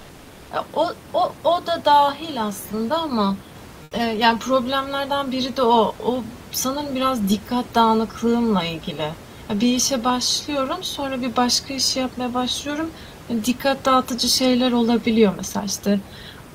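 From 1.64 s to 15.83 s, automatic gain rising sets in: the gain control judges the input too quiet and slowly turns itself up by about 8 dB, so the speech and the room noise beneath it swell together across nearly the whole clip.

Between 3.83 s and 3.91 s, the real background is swapped for comfort noise, likely because discontinuous transmission paused sending while no speech was detected. For those 80 ms the room noise becomes a smoother noise of a different tone, about 3 dB quieter.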